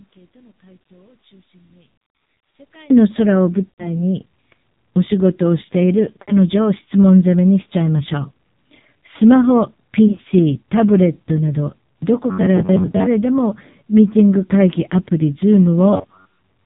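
Right from the start the speech runs through an AMR narrowband mobile codec at a very low rate, around 5.9 kbps. Everything above 4 kHz is gone, and the vocal-tract model has so few pulses per subframe that the voice comes out buzzy and synthetic, with heavy codec damage the whole way through.

Over the first 2.90 s the speech sits about 24 dB down, as if only the leftover difference between two channels survived. That's most likely one channel inverted: with one side's polarity flipped, the centred voice cancels when the two are folded to mono, leaving just a faint residue until the level snaps back.

Then come the lost AMR speech frames. From 3.70 to 4.03 s about 80 ms of speech drops out. The decoder holds the last pitch and spectral shape while the gain sinks, so you hear a stretched, warbly smear fading toward silence, which fits four consecutive 20 ms frames. At 6.22 to 6.35 s there's a shorter version of the same thing, about 60 ms, consistent with three frames, and the voice comes back a bit rough. 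Between 10.08 and 10.25 s the losses are scattered rather than in a run, single 20 ms gaps spread over roughly 160 ms, which gives a stuttery, flickering warble instead of a clean fade.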